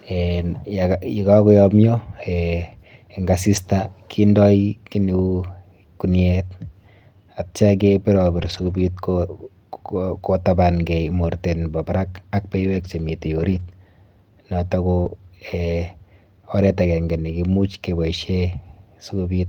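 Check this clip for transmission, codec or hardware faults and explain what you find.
Two transmission faults appear in this speech clip, both from lost packets.

Lost packets rebuilt from error correction at 3.55 s, 8.37–8.79 s, 12.55–12.85 s, 13.39–13.61 s, 13.67 s and 15.05 s: the decoder substitutes low-bitrate copies carried in following packets, so the speech continues without gaps but sounds rougher and noisier.

Short concealed packet loss at 13.63–13.67 s and 15.01–15.07 s: audio arrives too late, and the receiver extrapolates the preceding sound before blending back, producing a brief smear or wobble.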